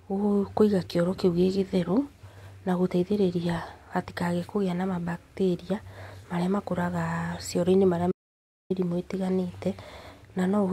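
At 8.12 s, just after "marĩa makũraga cioro marĩa", the speech stops dead. This is an audio dropout to silence. The gap lasts until 8.70 s, about 0.59 s. It is silent, with no room tone underneath. The speech then resumes abruptly, mid-flow. The input signal was likely lost for a moment, while recording carried on writing silence. Whatever was said during that gap is missing from the clip.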